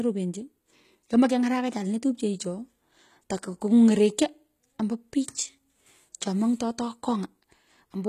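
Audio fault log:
Throughout, HE-AAC compression: the speech has plainly audible codec damage, with nothing above about 14.9 kHz and a treble band that sounds synthetic. The upper range is likely rebuilt by spectral band replication, with lower bands copied upward and shaped by a coarse envelope rather than coded directly. The harmonics above the crossover therefore fail to line up with those below, and sibilants come out gritty and metallic, which fits a low bitrate around 20 kbps.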